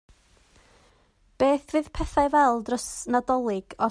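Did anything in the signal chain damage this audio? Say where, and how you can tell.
No, no damage is audible.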